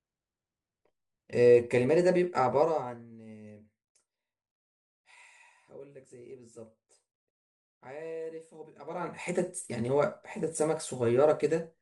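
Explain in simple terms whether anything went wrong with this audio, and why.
Nothing went wrong here: listening to the speech, nothing stood out as a problem.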